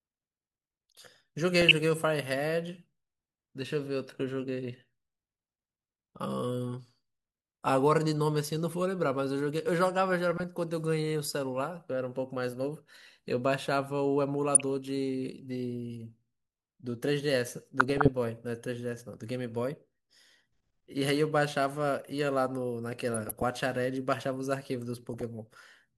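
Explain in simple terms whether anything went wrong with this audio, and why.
The speech gets brief DAB burbling at 1.61–1.71, 10.31–10.43, 14.55–14.63, 17.80–18.11, 23.14–23.43 and 25.14–25.21 s. Weak reception let corrupted data slip through, so slices of the sound jump around.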